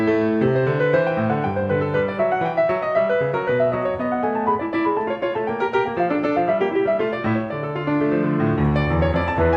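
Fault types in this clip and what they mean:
No technical faults can be heard in this music clip. Nothing in the sound calls for a fault type or an explanation here.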